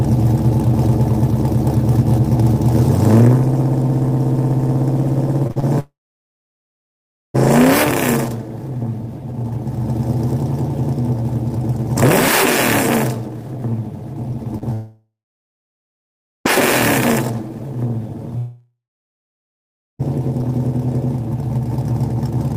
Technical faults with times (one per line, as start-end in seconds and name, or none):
5.47-5.64 repeated packet loss (robotic sound)
5.80-7.36 long network dropout
14.58-14.63 short concealed packet loss
14.73-16.47 long network dropout
18.38-20.01 long network dropout